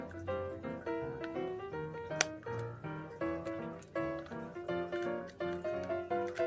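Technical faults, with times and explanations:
No technical faults can be heard, so there are no times or explanations to give.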